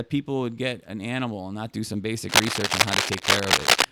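From 2.29 s to 3.85 s, cable scratch noise runs over the speech. Dense, uneven bursts of scratching and rustling sit a little louder than the speech itself. A worn cable or connector was likely being moved, its contact resistance jumping rapidly.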